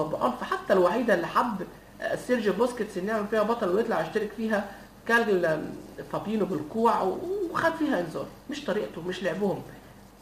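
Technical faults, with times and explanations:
Throughout, crude rate conversion: a gritty, inharmonic fizz rides on the louder, brighter parts of the sound, roughly 30 dB below them. Samples were simply repeated, fitting a 44.1 kHz to 48 kHz change, and the regular repeat pattern breeds unrelated tones.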